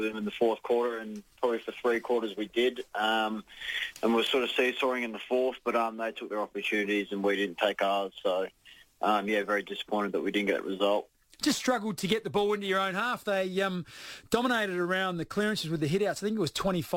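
Clock drift between sender and receiver runs through the whole clip. The sending clock is slower than the receiving one, by roughly 2 percent. So audio arrives a little more slowly than it is played out. The jitter buffer keeps draining toward empty. The receiver has to fill the gap to stay in step. Nothing about this shows as a single event. It appears as a steady pull on timing from start to finish.

Repeated timing corrections follow from that drift, from 0.16 s to 16.96 s. Because the sender runs slow, the receiver repeats short pieces rather than cutting them. Every edit goes the same way, stretching the sound. Together they run it at about 98 percent speed and add about 0.3 seconds overall. The repeats come at uneven spacing. Each is small. They register, if at all, as faint hiccups and a slightly unsteady, dragging tempo.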